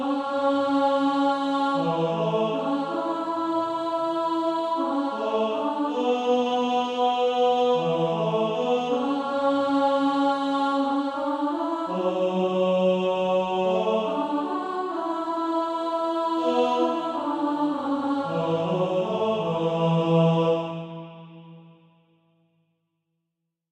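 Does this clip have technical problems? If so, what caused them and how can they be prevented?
No technical problems are audible.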